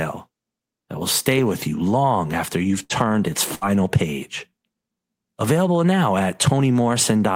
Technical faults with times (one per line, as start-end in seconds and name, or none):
2.83-3.03 burst of packet loss
3.55-3.64 burst of packet loss